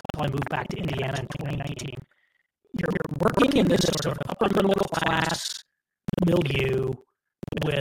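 Buffer tearing runs through the whole speech clip. The writer and reader of the ring buffer have slipped, so most of each period replays audio from about 150 ms earlier, with hard joins. The result is a steady robotic rattle at 21.5 Hz, which fits a 2048-sample buffer.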